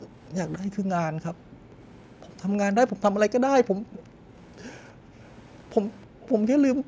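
Right from the start, 0.0 to 0.11 s, the room sound gets pulled down by about 27 dB. That's background gated by the echo canceller, ducking the mic while the far end plays. It happens again at 1.33–1.76 s, 3.81–5.16 s and 6.07 s to the end, dipping as deep as about 40 dB before the room tone snaps back. Woven through that is a faint echo leak: a copy of the speech trailing by 320 ms, likely what the far side's canceller let slip past its loudspeaker. It shows up briefly at 0.25–0.29 s, then at 1.94–2.74 s, and longest from 3.93 to 6.29 s, where it's loudest, still roughly 30 dB under the speech. The call's mic processing leaves nothing above 8 kHz, which is normal for this path.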